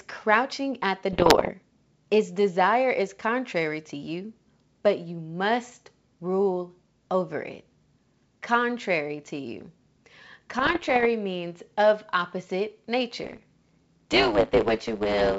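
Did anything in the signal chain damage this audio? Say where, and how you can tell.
Yes. The damage is on the ADPCM link: the sound is G.722 wideband telephone coding at 64 kbit/s, and it shows bit errors. Right after "crouching at the", from 1.13 to 1.51 s, there are pops and rough bursts with brief level jumps, which suggests an error rate of around 2 percent. A milder stretch from 10.59 to 11.06 s, just before "means of opposite", suggests under 1 percent. Each flipped bit corrupts the decoder's step size and predictor, so the damage smears on for milliseconds. Packet loss would leave gaps or repeats, not this ringing roughness.

At the buffer stage, from 13.23 s after "means of opposite" to the end, there is a block size mismatch (truncated). One stage writes blocks longer than the next one reads, and each block's tail is discarded. This produces a steady 109 Hz buzz at the block rate and speeds the audio up by 1.09 times while the pitch stays about normal. 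A plain sample-rate error would shift the pitch along with the speed, and it would add no buzz.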